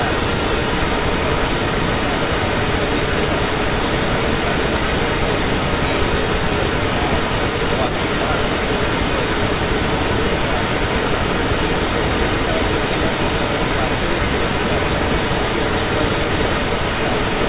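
From the start to the end at 17.48 s, the speech is followed by a second copy about 0.37 s later, roughly as loud as the original. This is likely an echo leak: a far-end loudspeaker's sound got past that side's echo canceller and was sent back. On a spectrogram, each syllable's harmonics reappear shifted right by that delay, confined like everything else below 4 kHz by the call codec. The waveform shows smeared, doubled envelopes.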